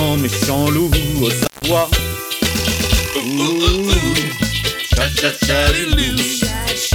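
An intermittent contact, a loose cable or plug briefly losing connection, disturbs the audio between 1.36 and 1.72 s. The line opens for about 150 ms in that span, so the sound drops out, leaving faint hiss, with crackle as the contact breaks and remakes.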